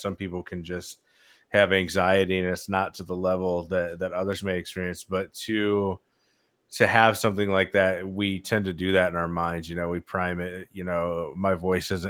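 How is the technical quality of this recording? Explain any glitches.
No glitches or faults to report; the Opus voice compression at 24 kbps, running in hybrid fullband mode, leaves only light coding damage on the speech.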